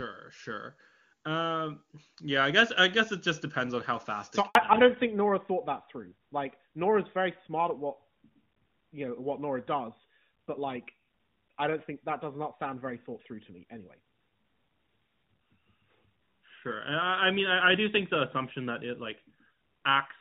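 At 4.47 s the sound fades out within a few tens of milliseconds and stays silent until 4.55 s, an 80 ms handover gap while the call switched networks. Unlike packet-loss concealment, nothing fills the hole. There is no buzzy repetition, just clean silence.

From 4.55 s to the end there is a fallback to narrowband. The clear HD Voice sound, which fits AMR-WB at its top rate, gives way to a hard ceiling at 4 kHz, consistent with AMR-NB at 12.2 kbit/s. This is a sudden codec switch rather than gradual muffling, so the speech turns duller and rougher at once.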